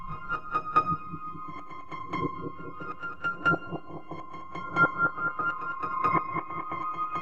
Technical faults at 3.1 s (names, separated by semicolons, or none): none